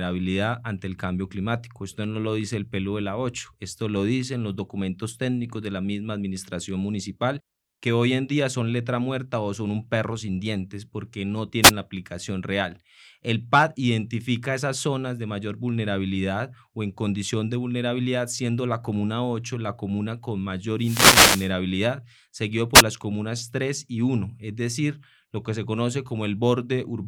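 At 11.62 to 11.72 s, 20.78 to 21.52 s and 22.74 to 22.82 s, wireless microphone noise hits break into the speech as swishes of static as the FM signal fades and receiver noise swells. Spectrograms show broadband vertical smears, waveforms a hissy envelope over the speech.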